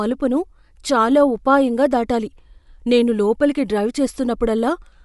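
Throughout, the speech stops dead above 11.5 kHz and carries a breathy, grainy edge, likely Bluetooth LC3 compression, which fits a 48 kbps stream.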